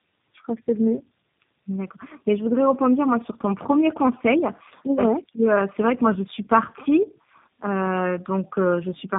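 Tandem speech coding runs throughout: the speech went through about three low-rate codecs in turn, so it sounds rough, muffled and warbly, with nothing above 3.7 kHz.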